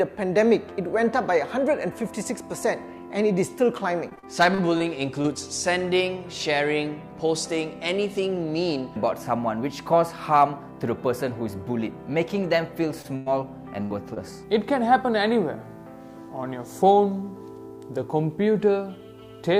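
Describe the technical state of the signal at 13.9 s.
At 13.9 s the signal is inside a burst of packet loss running from 13.82 to 13.92 s. Several consecutive packets never arrived in time, so the receiver had nothing to play and bridged the hole by extending the last sound it had, letting it die away over about 83 ms. The result is a brief frozen buzz or hiss that fades, after which the audio picks up roughly 80 ms further along, with that stretch simply gone.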